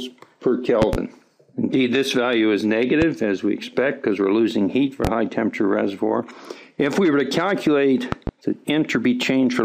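Six loud pops sit on top of the sound, which carries on underneath. A pair of sharp pops falls between 0.82 and 0.97 s, single pops at 3.02 to 3.06 s and 5.05 to 5.08 s, and another pair between 8.12 and 8.31 s. Each peaks around 15 dB above the signal, likely from a voltage step or pulse such as static or a switch. The waveform shows tall narrow spikes, and the spectrogram shows thin vertical broadband stripes.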